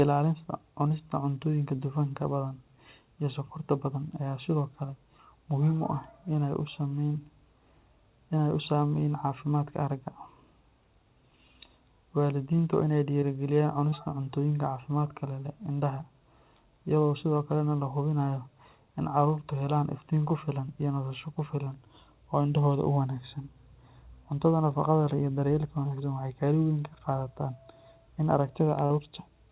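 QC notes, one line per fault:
0.88, 1.76, 2.48, 13.20, 13.90, 21.64 and 28.86 to 28.92 s, short concealed packet loss. Each of the first six times about 20 ms of speech failed to arrive in time. At 28.86 s the gap is about 40 ms. The receiver filled each hole by extending the last sound, pitched if voiced and noise-like if not, then crossfaded back. Each event is a brief smear or wobble. A short consonant can disappear. The band-limited, telephone-like sound with nothing above 4 kHz fits a G.711 call path.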